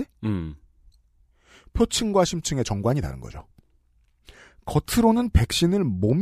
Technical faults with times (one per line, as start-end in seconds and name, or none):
none